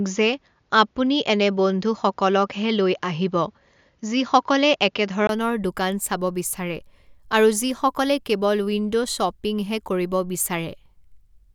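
From the start to 5.29 s the speech is dull and boxy, with nothing above 7 kHz, a faint extra background noise far below the speech and a modest level difference. A 20 ms silence then opens at 5.29 s, just before "দোকান চাব বিচাৰে", and full clarity returns. This is likely an input switched to a poorer device. A plain low-pass filter would not bring its own noise floor, level shift and gap at the change.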